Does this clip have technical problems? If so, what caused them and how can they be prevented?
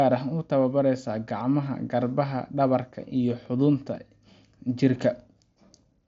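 Yes. Periodic USB or driver dropouts cause ticks every 0.5 s from 2.46 to 3.96 s. A blocked driver skips about half a millisecond of audio each time. To prevent it, stop background tasks that stall the USB bus or use a larger audio buffer.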